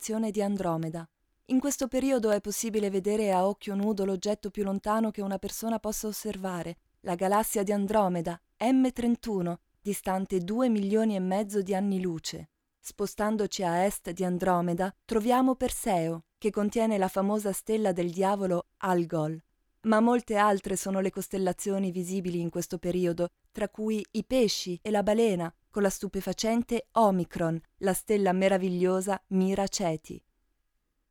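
From 0.83 s to 3.83 s, periodic USB or driver dropouts appear as a row of ticks exactly every 0.5 s. Each time, the audio path stalls briefly and a tiny fraction of a millisecond of signal is replaced by silence, leaving a sharp discontinuity in the waveform. Random glitches would fall irregularly, but these are strictly evenly spaced and audible only where sound is present, pointing to a recurring background task blocking the bus or driver.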